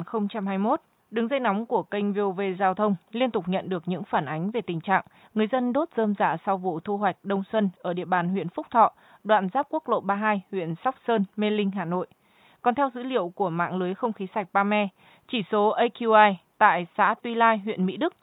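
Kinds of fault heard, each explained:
No faults heard in this speech recording; the only background is the room's own noise, sitting about 50 dB below the speech.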